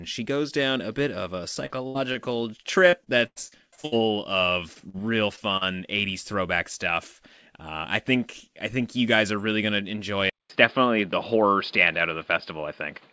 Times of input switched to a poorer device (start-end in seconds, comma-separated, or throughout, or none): 10.30-13.12